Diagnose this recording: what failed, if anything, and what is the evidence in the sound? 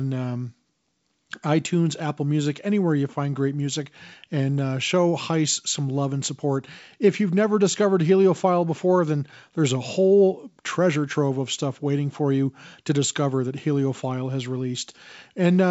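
Nothing in the chain has failed: the speech comes through G.722 wideband telephone coding at 64 kbit/s, with the audio band reaching up to 7 kHz and at most a faint trace of the light hiss that the coarsely coded upper band adds.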